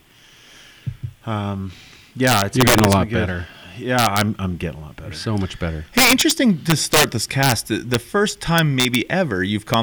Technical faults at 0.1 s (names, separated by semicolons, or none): none